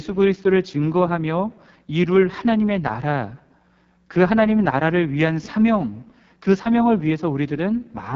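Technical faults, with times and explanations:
Throughout, AMR wideband (HD Voice) codec: the speech has a rough, raspy, buzzy grain, with nothing above about 7.4 kHz. The coder models the voice up to 6.4 kHz with a pulse-excited vocal tract filter and fills the top band with shaped noise. Such heavy damage points to one of its lowest rates, around 6.6 kbit/s. A narrowband phone codec would cut near 3.4 kHz, and a plain low-pass filter would leave no rasp.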